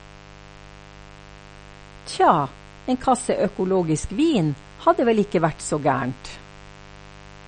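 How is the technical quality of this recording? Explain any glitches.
The technical quality is poor, with two faults running through the whole speech clip.

Mains buzz throughout: switching spikes leak in twice per 50 Hz cycle, sitting roughly 25 dB below the speech as a raspy drone, drawn as evenly spaced horizontal harmonic lines on a spectrogram.

Throughout, the top end stops dead at 9 kHz and the speech sounds watery and swirly, likely from MP3 compression at a low bitrate near 40 kbps; a spectrogram shows a hard ceiling and flickering patches.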